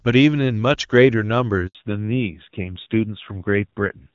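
At 1.67 s a handover gap silences the speech for 80 ms, until 1.75 s, as the call switches networks and no frames arrive.

From 1.75 s to the end, a fallback to narrowband removes everything above 4 kHz. The speech turns duller and rougher, pointing to a drop from HD Voice to a low-rate narrowband AMR codec.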